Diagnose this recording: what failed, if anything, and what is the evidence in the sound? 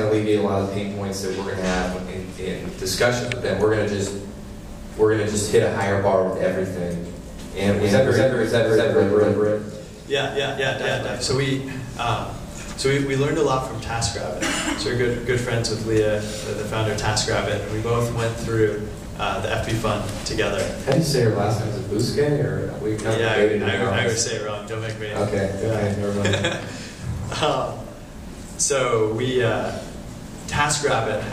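A doubled audio track runs from 7.39 s to 11.37 s: a second, full-band copy trails the original by roughly a third of a second at about equal loudness, with no decay or room colour, and it switches on and off abruptly. The likely cause is a second, slower capture path or an edit stacking two offset copies.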